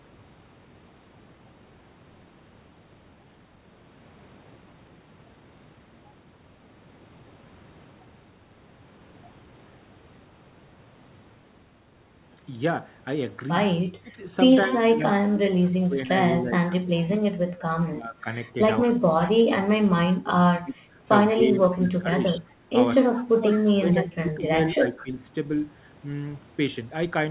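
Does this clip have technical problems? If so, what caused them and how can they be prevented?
Yes. Speech suppressed in double talk: the speech dips by up to about 20 dB, or drops out in pieces, from 14.0 to 20.8 s, 21.34 to 22.46 s (about 15 dB) and 23.1 to 25.23 s. This is likely an echo canceller ducking this talker while the far end spoke too. Prevention: use a headset, or an echo canceller with better double-talk detection.

Echo leak: brief delayed copies of the speech, trailing it by 204 ms, appear at 14.64 to 14.79 s (about 15 dB below the speech), 17.86 to 17.90 s (about 35 dB below), 23.02 to 23.93 s (about 20 dB below) and 24.98 to 25.03 s (about 25 dB below). The likely cause is loudspeaker sound the far-end echo canceller failed to remove. Unlike room reverberation, which smears continuously, these are distinct repeats at a fixed delay. Prevention: the far end should lower its speaker volume or use headphones.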